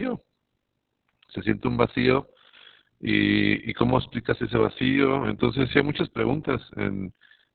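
From start to finish, the speech carries Opus voice compression, heavy and at a very low rate. Nothing survives above 4 kHz, so the band is narrowband and the sound is muffled. The coder is working in its SILK linear-prediction mode. It models the voice coarsely, so the result is hoarse and slightly robotic. The damage points to a bitrate near 6 kbps, with long frames of about 60 ms.

Throughout the clip there is also an overlap-add ripple. The audio was split into windowed frames and joined again with overlaps that do not add up to a steady gain. So the level swells and dips once per frame, by about 11 dB. The rate is around 50 Hz. It sounds like a rough, buzzy tremolo over the voice, a fast flutter.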